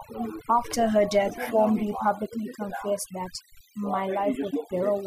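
From start to end, the gaps between phrases drop to near silence flecked with twinkling specks. That is overdone noise removal: a noise reducer set too hard pushes frequency bands near its noise estimate right down, taking quiet speech detail with them.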